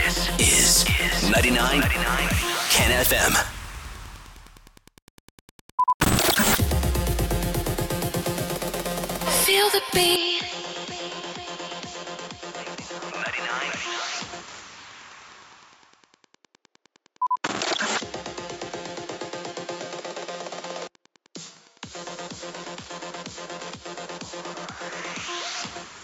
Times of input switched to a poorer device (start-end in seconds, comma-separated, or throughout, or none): 10.16-26.03